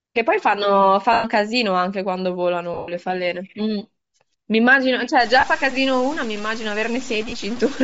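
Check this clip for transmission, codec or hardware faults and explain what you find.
Several faults are audible in this speech clip. A codec signature runs throughout. Four short dropouts have been concealed. The last stretch turns coarse and gritty.

Bluetooth LC3 compression affects the whole clip. The speech has a breathy, grainy edge, and the top of the spectrum sounds hissy rather than detailed. The likely cause is LC3 coding at a low rate, around 32 kbps with 10 ms frames. At that rate the encoder discards much of the upper band. The decoder then fills that band with noise. The damage is plainly audible.

Lost LE Audio frames occur four times. The first runs from 1.13 to 1.25 s, about 110 ms. The second spans 2.74 to 2.88 s. There about 130 ms is missing in scattered pieces, and the longest run is roughly 100 ms. Two brief gaps of about 30 ms fall at 5.40 to 5.43 s and 7.29 to 7.33 s. 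In each, the decoder repeats the last spectrum with scrambled phase. The speech smears into noise. The longer losses fade toward silence.

Low bit depth without dither starts at 5.20 s and lasts to the end. The sound becomes rough and granular. The grit follows the level, and quiet moments break up most. This likely comes from truncation to about 5 bits without dither. The rounding error then tracks the signal instead of forming a steady hiss. It sits about 20 dB below the speech.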